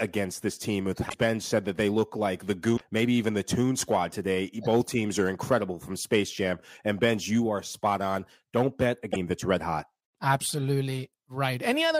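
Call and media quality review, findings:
Damaged data in a compressed stream in speech: three short glitches, 1.06–1.14 s after "this team with", 2.73–2.81 s between "they look like the" and "maybe even the", and 9.08–9.16 s. Decoder misreads corrupt frames and resyncs. Waveform: abrupt discontinuity.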